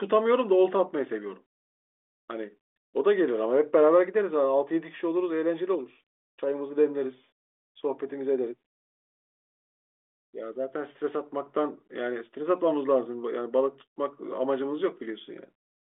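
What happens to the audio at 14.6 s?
Nothing goes wrong at 14.6 s: the speech carries on intact through that moment, still in its narrow telephone band with nothing above about 3.8 kHz, as the G.726 coding at 40 kbit/s leaves it.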